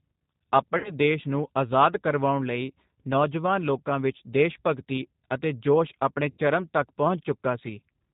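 The whole clip has the telltale sound of the G.729 codec, here the 8 kbit/s G.729A variant, and the damage is plainly audible. The speech is rebuilt from a vocal tract filter, a pitch predictor and a few sparse pulses per frame rather than from the actual waveform, so everything is band-limited below 4 kHz. It stays intelligible but comes across slightly rough and synthetic, with consonants dulled.

At 0.78 s there's a case of VoIP packet loss concealed by the speech codec. About 60 ms of audio went missing, which fits three lost packets. Through 0.92 s the decoder fills the gap by stretching its last pitch and filter, and the stretched sound sags in level before "ਦੇਸ਼ ਨੂੰ ਆਜ਼ਾਦ ਕਰਵਾਉਣ" comes back a little weak. The same thing happens from 6.30 to 6.42 s with about 80 ms lost, roughly four packets. That one is a longer stretch of concealment that fades further, and the sound after it takes a moment to firm up again.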